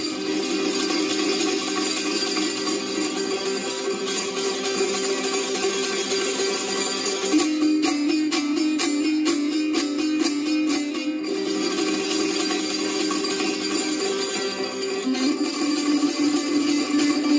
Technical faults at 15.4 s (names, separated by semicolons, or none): none